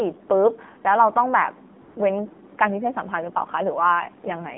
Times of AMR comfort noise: 0.28, 1.82-1.96

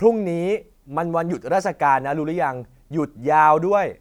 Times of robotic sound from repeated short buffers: none

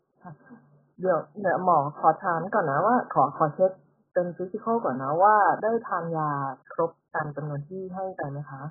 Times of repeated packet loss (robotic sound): none

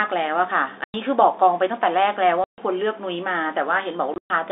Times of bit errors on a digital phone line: none

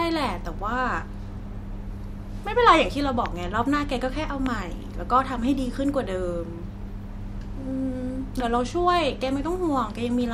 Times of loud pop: 3.26-3.28, 4.46-4.48

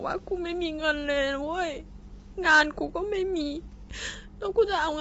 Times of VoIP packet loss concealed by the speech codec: none

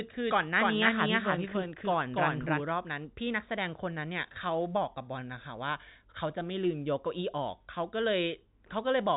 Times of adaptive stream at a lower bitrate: none

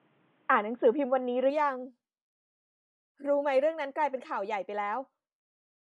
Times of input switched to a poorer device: 0.00-1.50

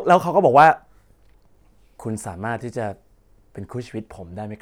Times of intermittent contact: none

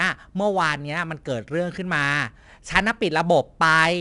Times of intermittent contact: none

